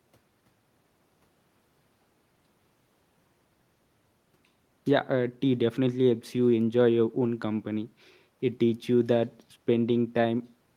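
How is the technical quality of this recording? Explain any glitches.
Nothing in this speech recording stands out as a glitch, so there's no fault to explain.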